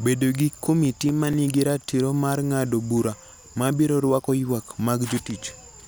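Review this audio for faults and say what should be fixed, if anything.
CD scratch ticks run through the speech from 0.85 to 2.18 s, just before "mar ng'ado bura ma": about nine regular ticks a second, the longest about 4 ms. A surface scratch defeated error correction once per disc revolution, so the player patched the samples. On a spectrogram they appear as evenly spaced thin vertical broadband lines; on the waveform, as brief spikes or flat notches. Re-rip from a clean disc with a secure-ripping tool that rereads damaged sectors.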